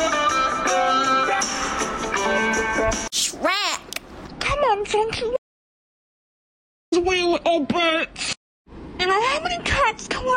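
At 5.37 s the sound drops out to total silence, no room tone at all, until 6.92 s: an audio dropout to silence, likely a lost input link.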